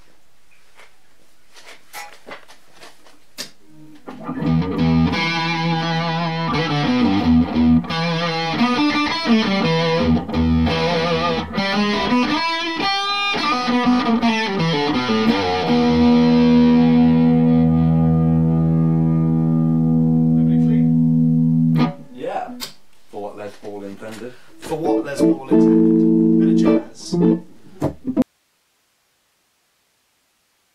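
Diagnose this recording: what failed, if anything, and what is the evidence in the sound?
An audio dropout to a faint residue occurs at 28.22 s and lasts to the end of the recording. The signal stops abruptly, not as a fade or natural pause, and what remains is steady hiss around 45 dB below the previous level. Because the noise floor continues, the downstream path stayed live. The likely cause is in the analogue wiring, such as a connector or cable losing contact, leaving the following gain stage amplifying only its own noise.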